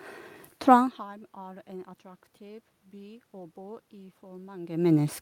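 No technical faults can be heard in this speech recording.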